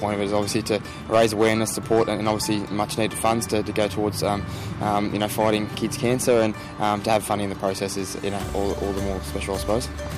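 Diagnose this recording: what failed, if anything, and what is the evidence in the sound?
Hard clipping runs throughout: peaks driven about 8 dB past the converter's limit get sliced flat, roughly one percent of samples, giving crackly harmonic grit on loud moments.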